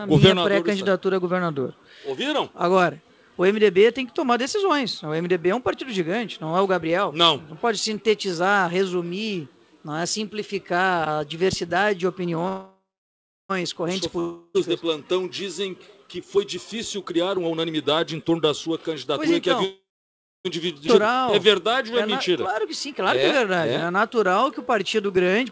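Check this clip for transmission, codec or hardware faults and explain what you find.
Six transmission faults turn up between 12 and 25 seconds, all of the kind a call's network path and jitter buffer produce. Above them the band stops at 8 kHz, which points to a wideband call codec such as G.722.

Call audio freeze, 12.48 to 13.51 s and again 19.65 to 20.47 s. The sound hangs on as a fading buzz, then falls silent, for about 0.69 s in the first case and 0.63 s in the second. It then picks up exactly where it stopped, so the clip is stretched by about 1.02 s and 0.8 s with nothing lost. The likely cause is packets held up in transit, draining the jitter buffer so the receiver had to improvise a continuation until they arrived.

Long network dropout, 14.19 to 14.56 s. The last sound is smeared onward as a decaying buzz for about 0.35 s with no true silence, and when the audio resumes, roughly 0.34 s of material is gone. 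Here the likely cause is a run of packets that never arrived, so the receiver concealed the hole and then carried on from later audio.

Jitter buffer speed-up, 16.16 to 19.64 s. Over this stretch the sound runs about 15% fast while keeping its pitch, giving a hurried, pressed feel. After a backlog builds, the receiver trims its surplus delay by cutting out many tiny pitch-period slices in succession, about half a second in total here.

Skip ahead, 20.87 to 20.89 s. The audio leaps forward almost seamlessly, with roughly a second of material simply missing and the two sides butted together. Queued audio was discarded, either on the way or by the buffer when it overflowed, so playback jumped to newer packets.

Jitter buffer slow-down, 21.02 to 25.41 s. From here to near the end the sound drags at about 95% speed with unchanged pitch, with drawn-out sounds. The receiver was building a reserve by repeating single pitch periods and pieces of pauses, adding about 234 ms in total.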